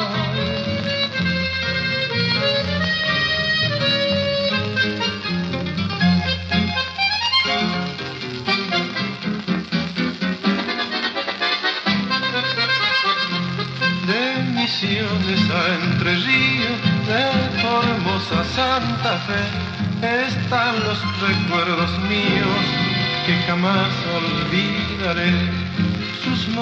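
There are no technical faults to describe in time order.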